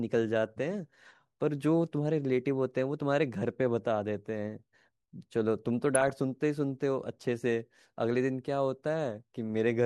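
From 5.83 to 6.10 s the speech gets DAB burbling, a quarter-second of short noise blips across 14 frames. Weak reception let a few tenths of a percent of bits slip past error correction into the MP2 data, so wrong samples put short blips of noise into single sub-bands.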